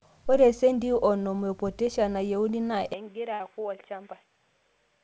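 An input switch to a poorer device, the likely cause, comes at 2.94 s and lasts to the end. Before it, the speech carries content up to 8 kHz, consistent with G.722 on a call path at around 64 kbps. At the switch the band suddenly stops at 3.6 kHz, so the sound turns dull and boxy. The level drops by about 10 dB, with no silent gap at the changeover, and the new device's background noise sits far below the speech.

A burst of packet loss follows from 3.34 to 3.41 s, shortly after the switch. The receiver covered about 56 ms by extending the last sound and fading it out, which gives a brief held buzz or dying hiss. When the audio resumes, roughly 60 ms of speech is simply missing, so it lands a little further along than it should.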